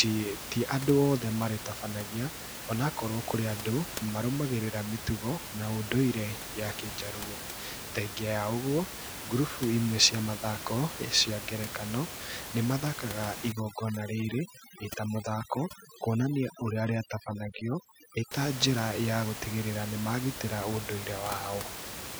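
From 13.52 to 18.31 s, overdone noise removal sets in: the suppressor pulls individual frequency bands down wherever they sit near its noise estimate, so the room noise, about 10 dB below the speech, collapses into near-silence with twinkling specks, and quiet parts of the voice are pulled down with it.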